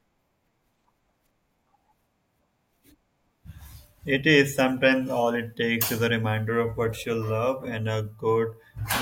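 No technical faults can be heard.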